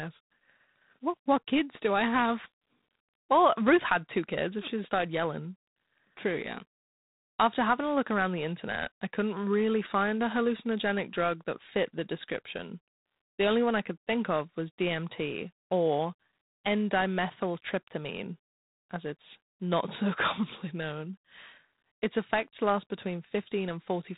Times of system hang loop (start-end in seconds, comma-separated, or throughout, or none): none